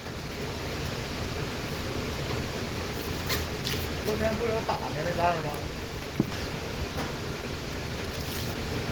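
Opus compression damage runs through the whole clip. Tones come out grainy, rough and noisy rather than swirly. The texture is hoarse and muffled, which fits the codec's hybrid speech mode at a low rate, around 16 kbps. Content still reaches about 20 kHz.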